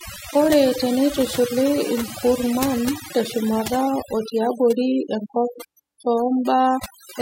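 Throughout, overdone noise removal leaves near-silent gaps sprinkled with twinkling specks, unlike a noise gate, which mutes whole passages cleanly.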